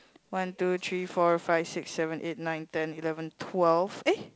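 Nothing goes wrong in this speech clip; it's simply carried over G.722 wideband telephone coding, which sounds as that path normally does at this setting, with nothing added on top to point out.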